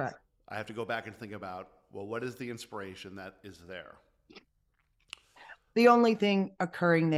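Nothing in this speech recording stands out as a technical fault, and nothing breaks up or trips over itself at any point along the way.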